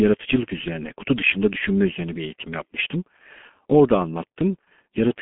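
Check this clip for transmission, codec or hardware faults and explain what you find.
The speech has passed through a G.723.1 codec for its whole length. This low-rate telephony coder models the voice in 30 ms frames at a rate that fits its 6.3 kbit/s mode, inside a 200 to 3400 Hz line band. Nothing above 3.6 kHz survives, so the heavy coding leaves the speech muffled and hoarse, with smeared consonants.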